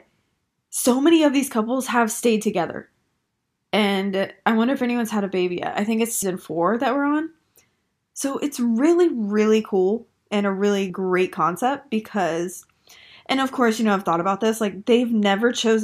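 Speech, with compressed frames skipped at 6.22 s, between "yet I think it's" and "four that we're on", and at 10.90 s, after "cool and a really". The audio jumps ahead about 150 ms, then about 30 ms, fitting roughly four and one lost 32 ms frames.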